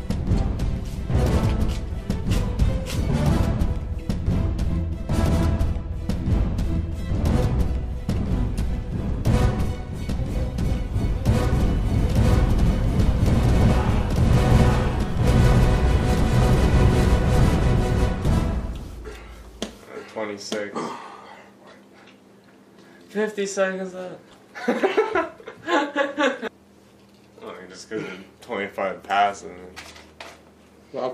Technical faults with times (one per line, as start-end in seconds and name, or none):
11.53-20.89 doubled audio track